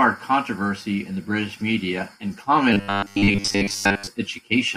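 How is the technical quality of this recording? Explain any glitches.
The recording has one clear glitch, robotic sound from repeated short buffers, from 2.73 to 4.07 s. New audio was likely arriving too seldom, so the playback software kept filling the gaps by replaying a tiny slice of what it already had while the real audio was dropped. Most of that stretch is repetition. The steady 100 Hz buzz points to a slice of about 10 ms, and it turns the speech into a rigid, metallic buzz that only loosely tracks the words.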